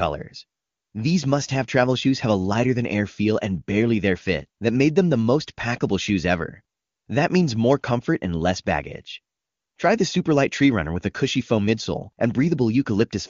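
The speech carries no technical faults, and its passage through the AMR wideband (HD Voice) codec leaves at most faint coding traces, which fits AMR-WB running at its highest 23.85 kbit/s mode.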